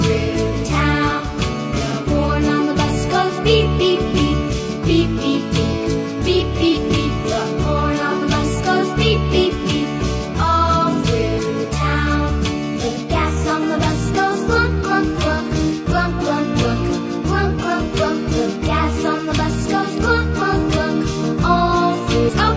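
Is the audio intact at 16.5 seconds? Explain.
Yes, the audio at 16.5 seconds is intact, with no dropout, click, distortion or other fault at that moment.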